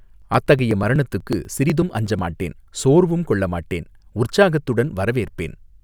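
A speech recording with periodic USB or driver dropouts from 0.1 s to 2.19 s: roughly twenty brief gaps, each around 2 ms, recur every 0.123 s. The missing audio is skipped outright, so the speech carries a steady train of small ticks as a blocked bus or driver repeatedly drops samples.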